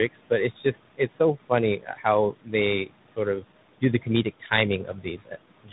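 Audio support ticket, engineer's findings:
Noise suppressor artifacts, whole clip. Background pumps down by about 18 dB between phrases and swells back under speech. Probable component: call-side noise suppressor. Mechanism: per-frame gain on bands judged to be steady noise. The gain jumps from frame to frame, so the leftover noise modulates and the speech bands pick up the same processing.

Tandem speech coding, whole clip. Nothing is audible above 3.8 kHz. Speech is rough, muffled and warbly, more than one narrowband codec alone would explain. The pattern fits two lossy speech codecs in a row, likely AMR-NB 12.2 kbit/s, then G.711 A-law, then G.726 32 kbit/s. Mechanism: decode and re-encode at each network border. Each coder quantises the previous coder's errors, so the damage stacks.

Speech cut by the noise suppressor, five spans. At 0.13–2.54 s, about half a second is affected in total, with the deepest drop about 19 dB. 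At 2.86–3.44 s, roughly 150 ms, about 13 dB. At 3.81–4.51 s, roughly 200 ms, about 15 dB. At 4.84–5.33 s, roughly 300 ms, about 14 dB. At 5.64 s to the end, roughly 100 ms, about 15 dB. Soft consonants and word endings sound swallowed. Mechanism: the suppressor misclassifies low-level speech as noise and attenuates it with the background.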